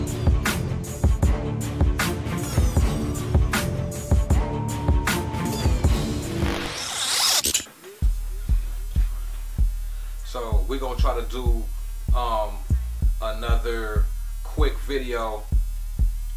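No technical faults can be heard anywhere in the audio.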